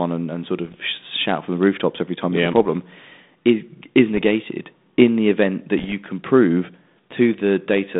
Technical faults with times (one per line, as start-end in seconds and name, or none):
0.59-0.77 bit errors on an ADPCM link
2.45-2.69 bit errors on an ADPCM link
4.14-4.22 bit errors on an ADPCM link
5.79-5.93 bit errors on an ADPCM link